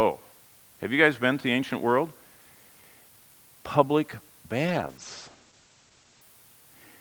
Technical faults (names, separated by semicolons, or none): low bit depth with dither; call bitrate drop